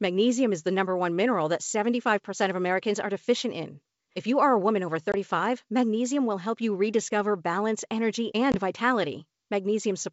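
Speech on a G.722 wideband call has packet loss on an ADPCM call at 5.12 to 5.15 s, after "are a woman over", and at 8.52 to 8.58 s, after "you rediscover balance energy". Each hard-edged gap is about one lost 20 ms packet. Unlike a plain dropout, the audio comes back slightly distorted while the decoder's predictor and step size catch up with the sender's.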